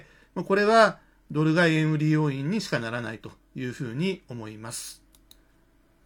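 No technical faults can be heard anywhere in the recording.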